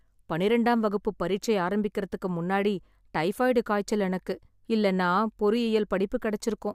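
Listening closely to the speech recording, nothing stood out at any point.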